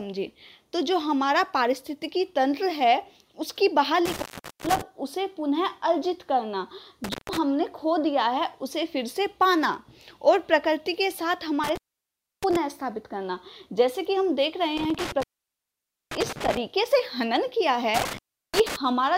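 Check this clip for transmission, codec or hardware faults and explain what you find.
The clip shows one hardware fault, an intermittent contact, recurring five times: at 4.05 to 4.81 s (open about 0.42 s), 7.04 to 7.38 s (0.15 s), 11.64 to 12.56 s (0.65 s), 14.77 to 16.57 s (0.88 s) and 17.94 to 18.76 s (0.35 s). A loose plug or cable briefly breaks the circuit, so the sound drops out behind crackly edges and faint hiss. On a waveform these are collapsed, near-flat stretches framed by sharp spikes. A spectrogram shows dark gaps bordered by broadband vertical streaks.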